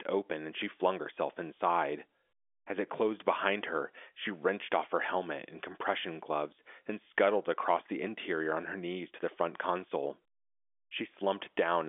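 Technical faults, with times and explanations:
Nothing stood out on listening; the speech comes through the G.711 telephone line as expected, narrowed to the usual telephone band.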